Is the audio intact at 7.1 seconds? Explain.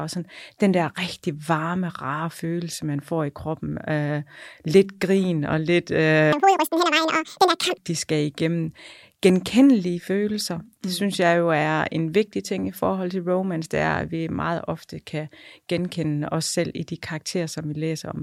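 No. From 6.33 to 7.78 s, just after "lidt grin og lidt", the speech races at double speed, a full octave high. This is audio read two samples at a time: each pair of samples is taken as one frame, so the recording plays twice as fast until "de skal igennem genkendelige".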